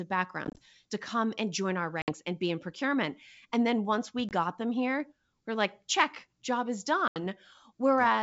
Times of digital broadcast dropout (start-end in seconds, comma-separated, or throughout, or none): none